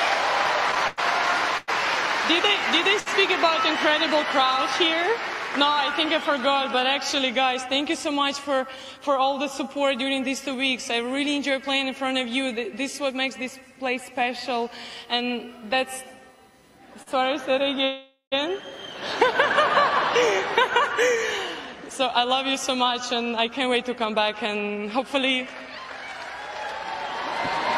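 From 0.71 to 1.70 s, repeated stalls (stutter): the jitter buffer ran dry four times, gaps up to 102 ms, so the sound drags in a halting rhythm rather than one hold.

At 3.00 to 3.08 s and 17.02 to 17.08 s, a short stall from a late packet holds the last sound for 63 ms, then 41 ms, each a single isolated stretch.

From 17.84 to 18.34 s, a call audio freeze: a 473 ms fill that fades, ending in 120 ms of silence, likely from packets held up in transit. It is far longer than the brief stalls.

From 20.82 to 25.29 s, a jitter buffer speed-up runs the audio at 103% speed, trimming around 150 ms while keeping pitch.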